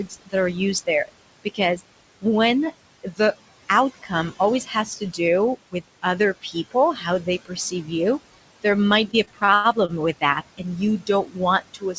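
Noise suppressor artifacts run through the whole clip: the room noise gets pulled down by about 19 dB between phrases, then swells back under the speech. The suppressor also keeps cutting speech, treating parts of it as noise, in four stretches: 0.06–2.24 s, 3.03–5.19 s, 5.72–7.9 s and 8.63 s to the end. It ducks soft bits by up to about 21 dB, so they sound swallowed. The first stretch adds up to roughly 0.4 s of affected sound, and the next two to roughly half a second each. From 8.84 to 9.91 s there are repeated stalls (stutter): the jitter buffer ran dry six times, and the receiver stretched the last sound over each wait, the longest 102 ms, so the audio drags and hiccups without losing anything.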